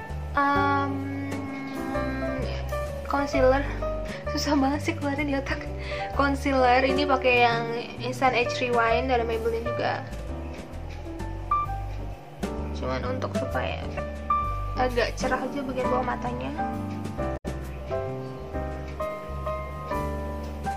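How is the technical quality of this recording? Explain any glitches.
The recording has two glitches, both from damaged data in a compressed stream. The first runs from 13.97 to 13.99 s. The second is longer, about 0.12 s, from 17.33 to 17.46 s. In each spot, part of the encoded data was lost or corrupted. The decoder misreads those frames, loses its place, and hunts for the next valid frame header. Each event sounds like a short glitch that breaks into the audio.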